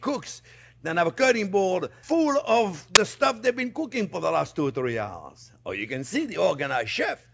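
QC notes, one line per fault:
2.95 s, file tags played as audio: a very short burst of harsh static with abrupt edges, lasting only about 12 ms. The bytes here are an embedded cover picture, which is already compressed and so looks statistically random; read as samples, it comes out as very loud white noise. On the waveform it shows as a dense block with vertical sides. On the spectrogram it is a thin, bright stripe spanning every frequency evenly.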